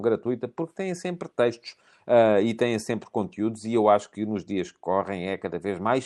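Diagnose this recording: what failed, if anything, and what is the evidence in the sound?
Nothing in this speech recording points to a failure. It shows the marks of a working WebRTC call path, with the top of the spectrum ending near 12 kHz, which fits Opus at around 32 kbps.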